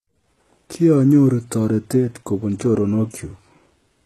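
For the whole speech clip, the treble sounds bright yet synthetic, and the s sounds come out gritty and lispy, with nothing at all above 12.4 kHz. The likely cause is HE-AAC compression at a rate that fits roughly 16 kbps. Only the lower band is truly coded, and the upper band is patched in by copying it upward under a coarse envelope. Unlike a plain low-pass, which leaves the top dull, this keeps the brightness, but its harmonics don't line up with those below.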